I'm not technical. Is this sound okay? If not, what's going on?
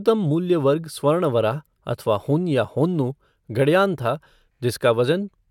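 Yes, it's fine: nothing in this speech recording cuts out, jumps or goes wrong anywhere along the way, so there's nothing to worry about.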